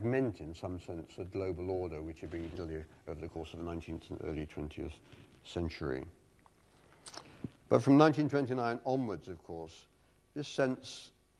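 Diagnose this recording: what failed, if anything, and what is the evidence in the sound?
At the network and jitter buffer stage, a skip ahead dropped about 0.7 s of queued audio at 2.55 to 2.57 s. Playback jumps forward with no gap, splicing the two sides directly.

The jitter buffer, still overfull, ran a speed-up from 2.65 to 4.03 s, trimming pitch-period slices totalling about 0.2 s. The sound plays at 115% speed, hurried but unchanged in pitch.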